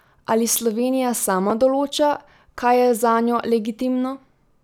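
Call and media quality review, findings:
Chunks out of order, 1.50 s, before "določa kaj": brief jumbled moment as one 5.33 ms chunk plays one slot late. Nothing is dropped, unlike a gap. Chunk arrived or was written late.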